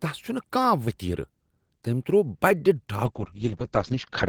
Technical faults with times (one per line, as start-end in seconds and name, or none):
3.07-4.29 call bitrate drop